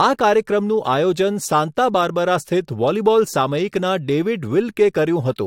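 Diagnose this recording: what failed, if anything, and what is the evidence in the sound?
Nothing in the recording points to a failure at any stage of the chain. The speech holds steady throughout, with no audible event that would need diagnosing.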